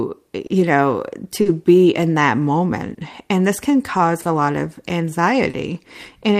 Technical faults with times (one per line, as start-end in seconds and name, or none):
0.00-6.40 clock drift between sender and receiver
0.47-0.52 short stall from a late packet
1.42-1.48 short stall from a late packet
2.58-6.37 repeated timing corrections
2.94-2.99 short stall from a late packet
4.22-4.27 short stall from a late packet
5.51-5.56 short stall from a late packet